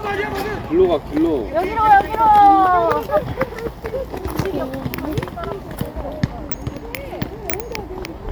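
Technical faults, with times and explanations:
No technical faults can be heard anywhere in the clip. Nothing in the sound calls for a time or an explanation.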